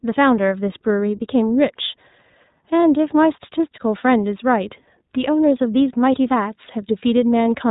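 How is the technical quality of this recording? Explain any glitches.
Quality is limited: the speech runs through the iLBC codec the whole way, and the damage is plainly audible. Nothing gets through above 3.8 kHz, so it sounds narrowband and boxed-in. Each short frame's excitation is coded on its own, which points to 20 ms frames at the 15.2 kbps mode, and that leaves the speech slightly rough and synthetic throughout.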